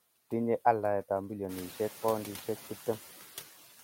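Noise suppressor artifacts run throughout the clip. The suppressor estimates which frequency bands hold steady noise and pulls them down, by about 9 dB, frame by frame, so the room noise dips in the pauses and swells back under the speech. That room noise gets louder at around 1.5 s and still sits about 15 dB below the speech.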